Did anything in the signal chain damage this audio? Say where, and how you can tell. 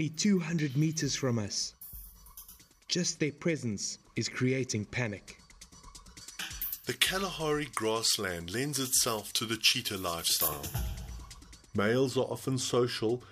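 Yes. From 6.21 to 10.48 s, pre-emphasis was left on: the transmission or recording stage boosted the treble along a J.17-shaped curve, about 11 dB at 10 kHz relative to 1 kHz, and the matching de-emphasis was never applied. Unlike harsh EQ or aliasing, the lift is a smooth rising shelf with no added tones.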